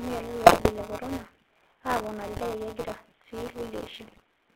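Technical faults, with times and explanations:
Throughout, GSM full-rate codec: the speech is confined to a band of about 250 Hz to 3.6 kHz, with a gritty, buzzy roughness. This coder rebuilds the voice from a vocal-tract filter driven by a thinned, regularly spaced pulse excitation rather than the real waveform, and the result fits the 13 kbps full-rate scheme. The missing top end and the coarse excitation make the grain plainly audible.
Throughout, buffer tearing: a steady mechanical rattle at 172 Hz rides on the speech and disappears in the gaps. The writer and reader of a circular playback buffer have drifted so that they cross inside every cycle. A slice of each period, roughly a sixth, is replayed audio from around 20 ms earlier, with abrupt joins on both sides. The repeat rate fits a 256-sample buffer, producing that robotic buzz.
0.46–0.71 s, 2.32–2.41 s and 4.06–4.22 s, GSM bit errors: three short bursts of squawking, popping and gargled distortion break up the speech, the first being the longest. 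These sound like corrupted bits reaching the GSM decoder, consistent with a few percent of bits flipped. Damaged filter, pitch or gain values warp the spectrum or spike the level for individual 20 ms frames, which gives the sudden, unnatural bursts that end once clean frames resume.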